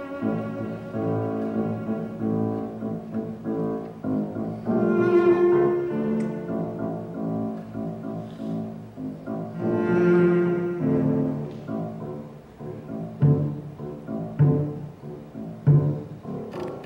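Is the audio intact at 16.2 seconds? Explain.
Yes, the audio at 16.2 seconds is intact, with no dropout, click, distortion or other fault at that moment.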